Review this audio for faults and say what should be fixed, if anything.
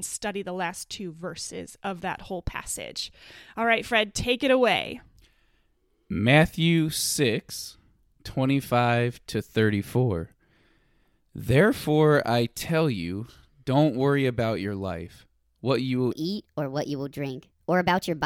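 A section at the wrong speed runs from 16.12 s to the end at 18.25 s, likely because that stretch was rendered or played back against the wrong clock. Right after "life what you will", the speech jumps to 1.33 times its proper speed, so the pitch rises by about five semitones at the same instant and the voice turns high and hurried until the clip ends. The fix is to slow that stretch back down by the same ratio.

To prevent it, check that every segment is rendered and played against the same clock as the rest of the session before export.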